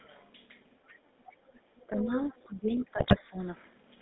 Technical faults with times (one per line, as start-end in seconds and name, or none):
0.00-4.02 GSM full-rate codec
0.86-0.93 other side's voice leaking through
0.93-1.23 background gated by the echo canceller
1.30-1.35 other side's voice leaking through
1.51-2.18 speech suppressed in double talk
1.94-2.86 other side's voice leaking through
2.47-3.38 speech suppressed in double talk
2.98-3.16 GSM bit errors